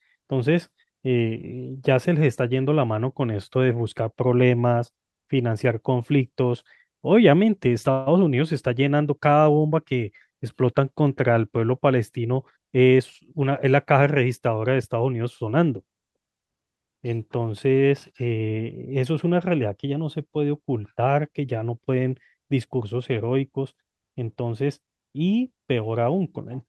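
A speech recording carried over a WebRTC call path, with high frequencies rolled off around 12 kHz, consistent with an Opus superwideband setting. From 7.91 to 8.08 s there is a call audio freeze: the sound does not stop but is stretched into a brief fading buzz or hiss lasting about 150 ms, and then resumes exactly where it left off with nothing lost. The likely cause is late-arriving packets draining the jitter buffer, so the receiver filled the gap by extending the last sound. That inserted roughly 150 ms of extra delay. Between 12.24 and 13.65 s the jitter buffer speed-up follows. To work off the accumulated delay, the receiver cut many short pitch-period-length pieces out of the signal, removing roughly 150 ms in total. The speech therefore plays at about 110% speed with its pitch unchanged and sounds noticeably hurried over that stretch.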